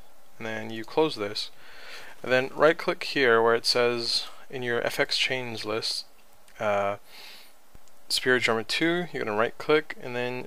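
At 5.73 s a DC step shifts the waveform's zero line, heard as a low thump rather than a click-like dropout, and it steps back at 7.75 s.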